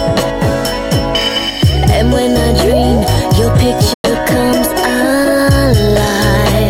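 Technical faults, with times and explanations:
3.93 to 4.04 s: AAC frame loss with muting. The sound falls into a 107 ms gap, consistent with five lost AAC frames whose spectra the decoder set to zero. Overlapping windows fade the level out and back in, giving a soft-edged hole.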